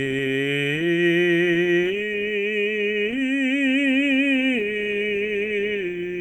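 A music clip, marked by clock drift between sender and receiver that runs throughout. The sender's clock runs about 3 percent slow against the receiver's. So the receiver's buffer keeps draining, and the stream falls slightly behind. The result is a faint unsteadiness in tempo across the whole clip. It is never a single obvious break. Instead, the time feel wobbles by small amounts at uneven moments.

The drift shows up as repeated timing corrections from 0.08 s to 6.09 s. To keep playing without running dry, the receiver repeats short pieces of audio. The net effect is playback at 98 percent speed. Roughly 150 ms is added over that span. Each repeat is tiny. They are all in the same direction but irregularly spaced. What a listener notices is slight hiccups and a dragging pulse, not clear stutters.

Scattered short gaps appear between 0.41 s and 1.94 s. About four packets arrived late or went missing there. 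The longest hole is only around 7 ms. Each one was patched by stretching the last sound forward, about 20 ms in total. That covers around 2 percent of the stretch. They come across as brief ticks or small smears in the music.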